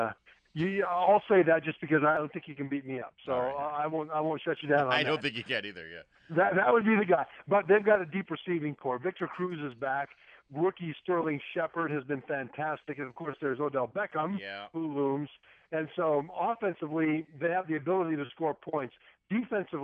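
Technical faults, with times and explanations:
2.17–4.57 s and 7.95 s to the end: one channel drops out. The level falls abruptly by about 6 dB at each onset, recovers sharply at 4.57 s, and stays low from 7.95 s to the end. This is likely one stereo channel going silent. After the mono sum, material shared by both channels loses half its contribution, hence the 6 dB step, and anything carried only in the missing channel disappears.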